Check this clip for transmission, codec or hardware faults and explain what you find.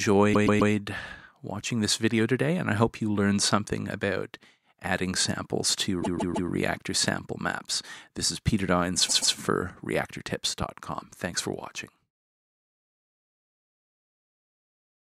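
Two faults are present: a repeating stutter and a single pop.

Repeated frames at 0.33–0.72 s, 6.02–6.49 s and 9.08–9.34 s: compressed blocks of roughly 130–160 ms replay two or three extra times, producing a stutter.

Loud pop at 10.62–10.64 s: a brief voltage pulse, likely from a switch or static, puts a sharp pop about 5 dB above the sound, which carries on underneath.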